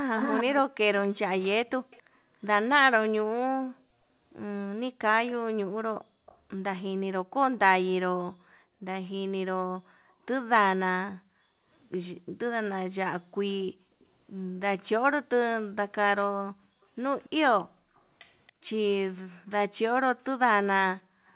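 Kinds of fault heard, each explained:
Echo leak: the speech repeats 279 ms late, strong early and faint later, likely leaking past an echo canceller; unlike reverb, it is a separate copy.
Background gated by the echo canceller: the room sound dips up to about 40 dB for moments, then returns, unlike a dropout that cuts all audio at once.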